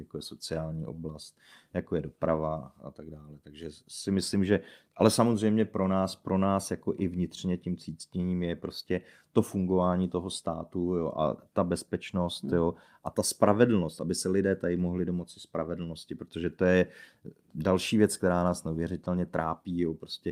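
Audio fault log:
Nothing to log here, as the speech comes through without a single fault turning up along the way.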